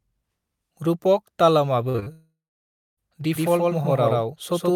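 From 1.89 to 2.08 s, repeated packet loss makes the speech choppy and robotic. Four gaps, the longest 46 ms, are patched by repeating the previous sound.

From 2.12 to 2.99 s comes a long network dropout, the likely cause. A brief fading buzz or hiss gives way to about 0.63 s of silence, and the lost speech never returns.

From 3.36 s to the end, a doubled audio track trails by roughly 150 ms at about equal loudness. The copy is dry, with no room colour, and starts abruptly.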